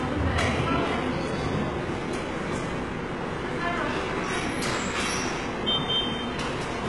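The likely culprit is HE-AAC compression at a very low bitrate, consistent with roughly 12 kbps, with heavy codec damage running through the whole recording. The encoder seems to have kept only the lower spectrum and synthesised the treble by copying lower bands upward under a coarse envelope. The result is a top end that sounds gritty and metallic, with nothing at all above about 11.4 kHz.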